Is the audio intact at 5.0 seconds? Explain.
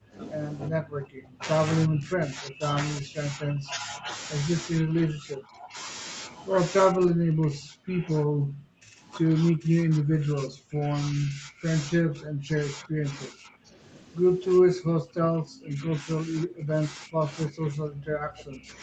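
No. Speech suppressed in double talk runs from 4.71 to 5.78 s, covering 5.0 s. The talker's level sinks by up to about 25 dB, adding up to roughly a second of damped speech. This is likely because both ends of the call were talking at once, so the echo canceller could not distinguish the near talker from loudspeaker echo and attenuated everything it heard, pulling the wanted speech down with the echo.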